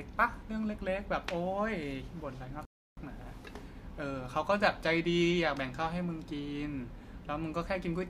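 At 2.65 s the speech stops abruptly in mid-flow and the output falls completely silent for about 318 ms, picking up again at 2.97 s. This is a playback stall. The likely cause is the player running out of buffered data or its output thread being blocked, so nothing reached the output until it recovered. On a waveform the gap is a flat, near-silent line with sharp edges on both sides. A spectrogram shows a clean vertical band, empty across all frequencies.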